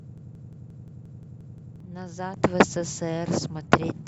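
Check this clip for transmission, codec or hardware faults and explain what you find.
Two faults are audible: a broken-record loop at the start and a sudden gain jump later on.

From the first instant to 1.80 s, a broken-record loop is already running. A fragment of about 176 ms repeats exactly, back to back, nine times, and whatever should have played there is missing. Unlike a stutter or a dropout, the copies are identical and unbroken. The likely cause is a stalled player, encoder or stream resending the last fragment it held.

At 2.37 s a sudden gain jump raises the level by about 6 dB from one sample to the next, and it holds to the end. The speech and the background noise step up together. That shared jump separates it from a louder talker or an automatic gain control, which would ramp and leave the noise floor behind. The likely cause is a gain setting or bit shift applied without a ramp.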